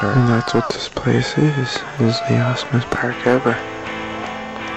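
No technical faults can be heard anywhere in this audio.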